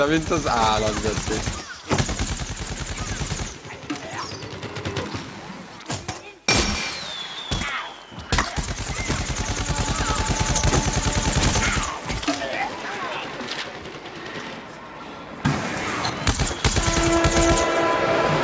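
Throughout, the gain ducks by around 10 dB under each loud sound: gain pumping, likely a fast limiter riding an over-high mic gain, showing as a flattened waveform envelope.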